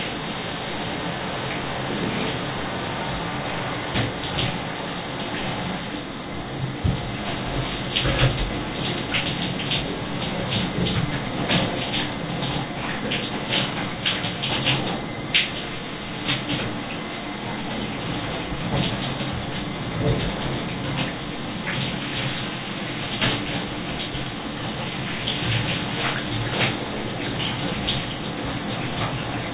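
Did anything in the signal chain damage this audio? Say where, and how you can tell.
No, nothing in the signal chain audibly damaged this recording of sounds; it runs intact throughout, with no sign of trouble at any stage.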